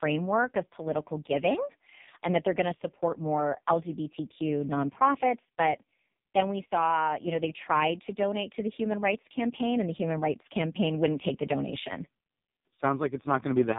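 From start to finish, the speech carries heavy AMR narrowband mobile codec damage. Nothing above 3.8 kHz survives, so it sounds thin and boxed-in. Voiced sounds turn buzzy and synthetic, which fits the lowest AMR-NB bitrate, near 4.75 kbps, squeezing each 20 ms frame.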